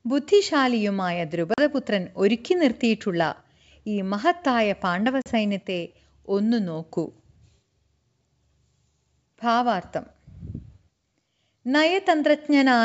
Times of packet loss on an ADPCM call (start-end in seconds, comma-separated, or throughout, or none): 1.54-1.60, 5.22-5.31